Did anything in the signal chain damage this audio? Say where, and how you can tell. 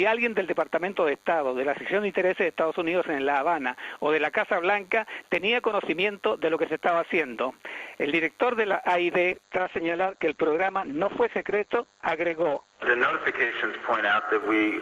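Yes. DECT cordless phone buzz runs through the whole clip and enters at the analogue wiring. A thin, steady 100 Hz buzz with many harmonics sits roughly 35 dB below the sound. A nearby DECT radio bursts every 10 ms, and the audio circuit rectifies those bursts.

A call bitrate drop starts at 9.34 s and lasts to the end, damaging the codec stage after a network bandwidth estimate fell. The top end collapses from 20 kHz to 8 kHz, and the sound turns rough and watery, worst for about 4.1 s. That fits the encoder dropping from roughly 48 to 9 kbps.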